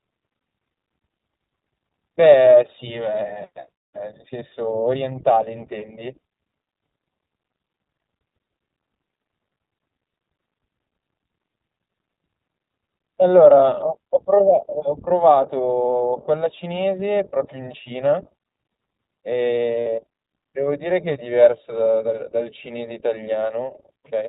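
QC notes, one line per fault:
throughout: iLBC codec. The speech runs through a narrowband VoIP coder that rebuilds each 20 ms frame on its own, which fits iLBC's 15.2 kbps mode. Nothing above 4 kHz survives, and the plainly audible coding leaves the voice rough and faintly synthetic.
19.81–19.87 s: lost iLBC frames. Packets went missing and the decoder filled the 60 ms hole, which points to three dropped 20 ms frames, by repeating the last pitch cycle blended with noise. This is heard as a brief held, buzzy vowel before the speech snaps back.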